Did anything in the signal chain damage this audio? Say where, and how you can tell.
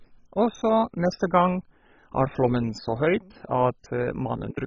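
Yes, at the codec stage. The speech is dull from start to finish, with nothing above 7.3 kHz. A gurgling, granular grit runs through it. Upper detail flickers in and out rather than fading smoothly. This is heavy MP2 compression, likely at a very low bitrate around 16 kbps. Layer II splits the signal into 32 sub-bands and shares out bits. Starved of bits, it drops the top bands entirely and coarsely quantises the rest.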